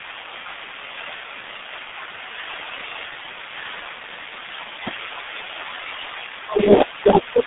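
It's a speech clip, and it's been through the G.723.1 codec for its whole length. Everything sits between about 200 Hz and 3.6 kHz with nothing above 3.8 kHz, so it's muffled and hoarse, consonants smeared, which fits a roughly 6.3 kbit/s telephony stream.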